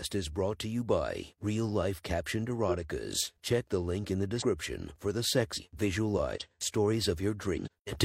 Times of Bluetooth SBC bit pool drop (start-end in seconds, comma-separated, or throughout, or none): none